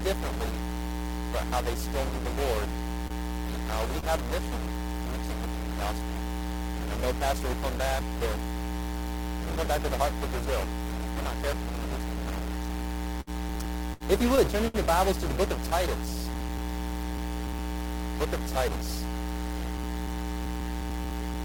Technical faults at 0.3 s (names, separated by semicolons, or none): stuck bit